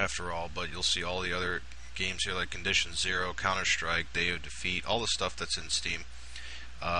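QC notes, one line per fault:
Nothing stood out on listening.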